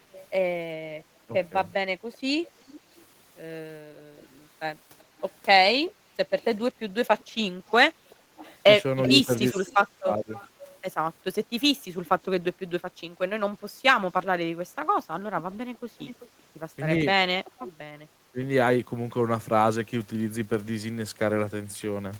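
From 0.12 to 12.25 s a faint delayed copy of the speech trails the talker by 388 ms, sitting roughly 25 dB below it. This is an echo leak, most likely a loudspeaker on the far end whose echo canceller let part of the returning signal through. On a spectrogram it shows as a weak ghost of each harmonic pattern, shifted right by about 0.39 s. On the waveform it is a low-level smear filling the gaps between phrases.

Inside that stretch, the speech briefly dips by about 10 dB from 1.27 to 1.31 s. This is speech suppressed in double talk, likely the canceller mistaking the talker for echo while both sides were active and turning everything down. A longer episode runs from 9.13 to 10.32 s, with cuts as deep as about 20 dB totalling around 0.7 s, and the speech sounds gated and dull. The waveform shows abrupt notches in the envelope. The spectrogram shows vertical gaps and a thinned upper band.

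The echo leak returns from 15.74 to 17.71 s, again at 388 ms, this time louder at about 20 dB below the speech. The same offset ghost harmonics are visible.

Overlapping its end, from 16.98 to 18.41 s, speech suppressed in double talk recurs. Scattered drops of up to about 20 dB add up to roughly 0.1 s, and they show as short chopped holes in the waveform envelope.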